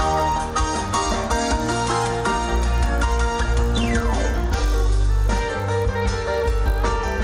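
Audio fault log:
throughout: resampler restarted on every block. A 50 Hz buzz rides under the sound whenever signal is present. Each 20 ms block is converted in isolation, so its edges lack their true neighbouring samples, leaving a small error per block, which fits a 24 kHz to 48 kHz conversion.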